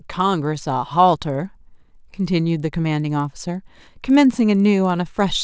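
Resampler restarted on every block, throughout the clip: each 50 ms block, in what sounds like a 24 kHz to 16 kHz conversion, was processed without its neighbours, leaving an error at every edge. This gives a steady 20 Hz ticking buzz beneath the speech.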